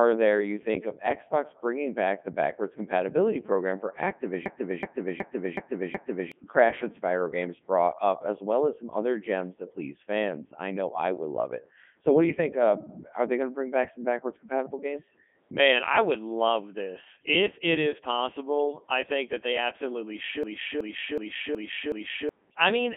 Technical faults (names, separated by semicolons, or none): Codec 2 vocoder; system hang loop